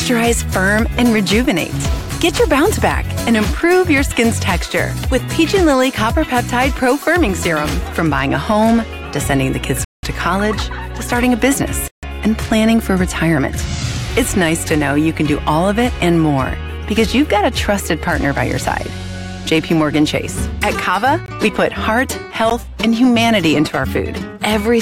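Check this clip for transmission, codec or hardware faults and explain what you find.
Four blocks of digital silence are present: 9.85–10.03 s (186 ms), 11.88–12.03 s (152 ms), 21.26–21.28 s (20 ms) and 22.50 s (13 ms). Samples were likely zeroed when the output buffer went unfilled; the first gap fits an 8192-sample buffer. The longer two are heard as holes, the 13 ms one as a tick.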